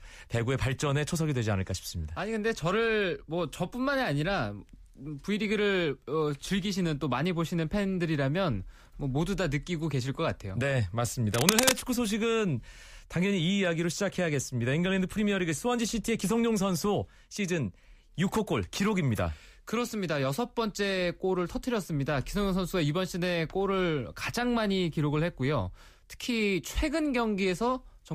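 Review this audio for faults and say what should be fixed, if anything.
Cable scratch noise occurs from 11.34 to 11.82 s: a half-second burst of harsh scratching and rustling, roughly as loud as the speech. It is likely a worn cable or connector being moved, its contact resistance fluctuating rapidly and injecting uneven noise. A spectrogram would show dense, ragged vertical streaks spread broadly across frequency, and the waveform would show spiky, irregular bursts riding over the signal. Replacing worn cables and securing connectors before recording prevents it.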